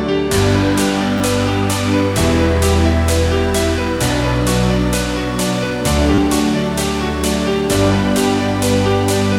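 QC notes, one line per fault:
1.18 to 1.20 s and 6.15 to 6.18 s, repeated buffer: a tiny slice of audio plays again two, then three, extra times, which fits a 10 ms buffer that wasn't refilled in time. The hard joins make a click or brief buzz rather than the silent gap of a dropout, and about 20 and 30 ms of audio are lost.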